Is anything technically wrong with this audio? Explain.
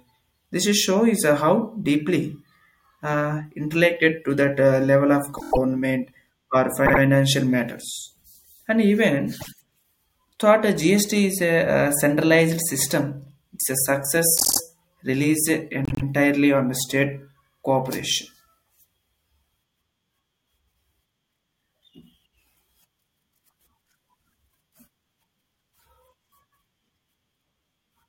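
Yes. The speech has repeated frames at 5.37–5.57 s, 6.85–7.00 s, 9.40–9.49 s, 14.37–14.60 s and 15.85–16.05 s. Short compressed chunks of 24 to 96 ms, consistent with a 24 ms frame size, play again one to six extra times, adding about 0.1 to 0.2 s each. This is heard as a mechanical stutter. A spectrogram shows identical blocks tiled side by side, and the waveform shows copied segments with abrupt boundaries.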